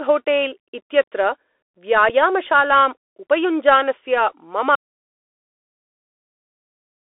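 Throughout, the speech carries Bluetooth CVSD headset codec damage. The band stops near 3.6 kHz. Loud peaks distort, s sounds turn scratchy, and a granular hiss sits underneath.

At 2.09 s comes unconcealed Bluetooth headset packet loss. A 7.5 ms hole, about one packet, cuts the speech abruptly, then sound resumes briefly quieter.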